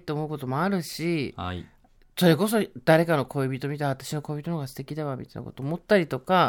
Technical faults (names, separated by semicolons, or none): none